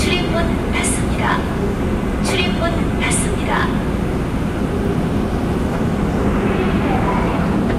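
Throughout, the level runs about 3 dB beyond what a stage can pass, so hard clipping flattens a small fraction of peaks, adding brief crackle.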